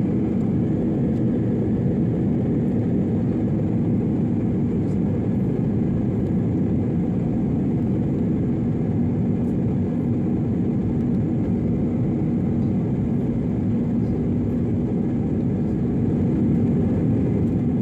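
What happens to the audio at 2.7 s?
Nothing goes wrong at 2.7 s; the audio plays through that moment intact, with no dropout, click, distortion or other fault.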